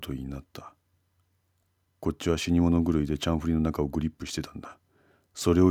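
No technical faults can be heard anywhere in this recording.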